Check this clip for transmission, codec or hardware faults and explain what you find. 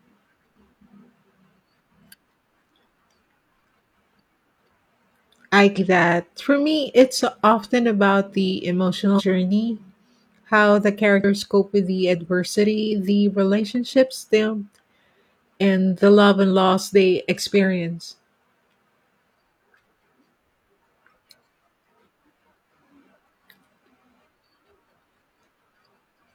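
The clip, which is speech, has damaged data in a compressed stream. Brief glitches occur at 5.74 to 5.79 s, 9.15 to 9.21 s after "it's often about the", 11.20 to 11.24 s between "how the" and "cope with the adversity", and at 14.70 s and 23.15 s. Corrupted bytes make the decoder misread frames and resync at the next header, giving a short disturbance heard as a chirp, squawk, click or short hole, unlike a dropout's clean silence.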